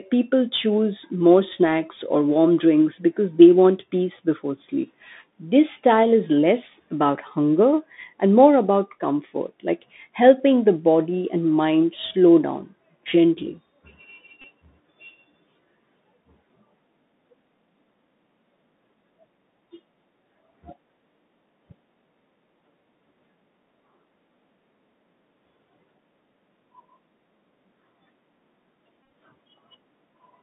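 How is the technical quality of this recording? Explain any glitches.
Quality is poor. The whole recording went through a narrowband Bluetooth headset link, and it drops out twice.

Throughout, the Bluetooth CVSD headset codec tracks the waveform with one-bit up/down steps and passes only about 200 Hz to 3.7 kHz. The speech sounds muffled and scratchy over a granular hiss.

At 14.42 to 14.45 s, and at 29.04 to 29.10 s, a Bluetooth headset packet was repeated. Lost packets were replaced by re-decoding the previous one, producing brief buzzy ticks. The second cluster is spread over about 100 ms, with runs of up to roughly 20 ms.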